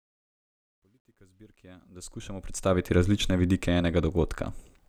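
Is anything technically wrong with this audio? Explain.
Yes. Truncation distortion on a fade appears from 0.0 to 2.93 s, just before "različne vidike", worst from 0.0 to 1.65 s. The fade-in's low-level stage drops bits without dither, consistent with about 12-bit precision, so the quiet speech turns gritty. The waveform shows stair-stepped, squared edges, and the spectrogram shows broadband hash.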